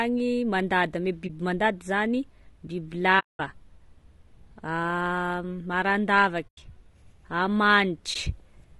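Across the whole clip the speech sounds rough and grainy. Harmonics blur, noise fills the gaps between them, and the top band sounds thin and synthetic. This is low-delay AAC compression, likely AAC-ELD at a low bitrate, around 32 kbps. Its short frames cannot separate pitch harmonics cleanly. Too few bits are left for fine detail.

At 1.28 to 1.30 s the sound fades briefly to nothing and returns. This is AAC frame loss with muting. The decoder zeroed a lost frame, and the overlapping windows soften the edges. A 20 ms hole fits one frame. The same soft-edged dropout recurs at 3.19 to 3.40 s for 200 ms, at 6.47 to 6.58 s for 100 ms, and at 8.13 to 8.16 s for 20 ms.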